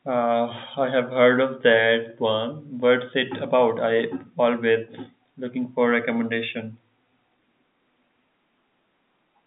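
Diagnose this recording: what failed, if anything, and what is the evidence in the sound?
Nothing in the recording points to a failure at any stage. The speech comes over a working G.711 telephone path, with the sound confined to roughly the 150 Hz to 3.7 kHz line band and nothing above about 3.8 kHz, as a fixed-line call would be.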